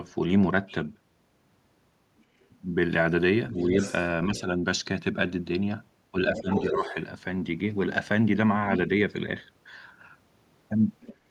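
A faint second voice, the other side's voice leaking through, appears at 2.19 to 2.24 s, barely audible. It returns more clearly from 3.49 to 4.05 s, roughly 15 dB under the talker, then briefly at 4.35 to 4.41 s. The likely cause is the far end playing on a loudspeaker and an echo canceller leaving residue in the microphone. Unlike room reverberation, it is a separate voice with its own timing rather than a smeared tail of the talker.

From 6.36 to 6.94 s that leaked voice comes nearly as loud as the talker, and the talker's level dips twice, from 6.32 to 6.49 s by roughly 15 dB and from 6.7 to 6.84 s by about 10 dB. This is speech suppressed in double talk, likely the canceller turning everything down while both sides spoke. A network dropout would leave hard gaps at random moments. Here the dips are partial and track the overlap. A last short scrap of leakage follows at 11.02 to 11.15 s.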